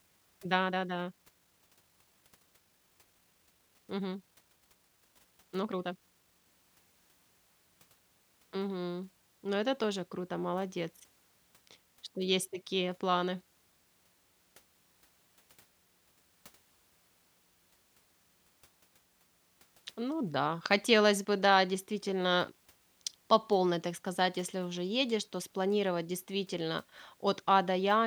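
From 0.0 to 6.48 s the speech runs as a time-stretched section, sped up to about 1.54 times normal pace while pitch holds steady. The likely cause is software squeezing the passage by dropping short slices, so delivery sounds rushed, then the pace shifts abruptly.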